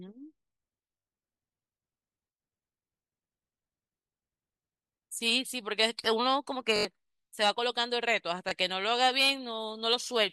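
Repeated buffers break the speech four times: at 0.98 to 1.07 s, 4.01 to 4.05 s, 6.76 to 6.85 s and 8.49 to 8.51 s. Each time fresh audio arrived late and the output replayed the same 21 ms slice, which fits a 1024-sample buffer, up to four extra times, dropping as much as a tenth of a second. It sounds like a rapid stutter or brief buzz. A waveform shows identical blocks back to back with hard joins, and a spectrogram shows vertical seams at a steady spacing.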